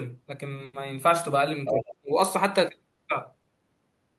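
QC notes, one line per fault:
0.64–0.75 s, 2.95–3.00 s, 3.42–3.52 s: short stall from a late packet. The jitter buffer ran dry and the last sound was stretched by about 90, 30 and 20 ms, then resumed with nothing lost, giving brief held, buzzy moments.
1.65–1.95 s: other side's voice leaking through. A second voice sits only a little below the talker, likely loudspeaker echo that the echo canceller left in the microphone signal.
1.67–2.11 s: speech suppressed in double talk. The talker's level drops very deeply in pieces, about 0.3 s in all, likely from the echo canceller turning both voices down while they overlap.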